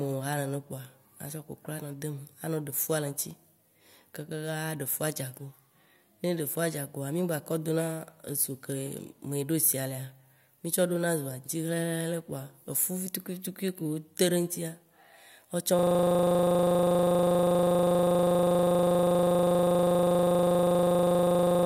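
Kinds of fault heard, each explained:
System hang loop: from 15.79 s to the end, the speech locks into a rapid, rattling 25 Hz buzz as one 40 ms slice repeats exactly, well over a hundred times. The system froze while the sound hardware kept replaying the same short ring buffer.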